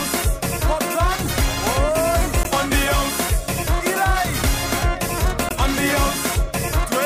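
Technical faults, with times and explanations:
2.43–2.46 s and 5.49–5.52 s, damaged data in a compressed stream: two short glitches, each about 30 ms. Corrupted bytes in the encoded stream made the decoder misread those frames and lose sync, so it spat out garbage until it locked back onto a valid frame header.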